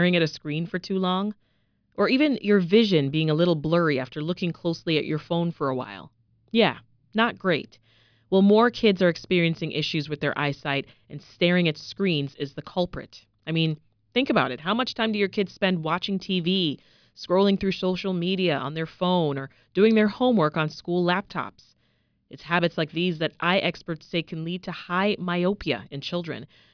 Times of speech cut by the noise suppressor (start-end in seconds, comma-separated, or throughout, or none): none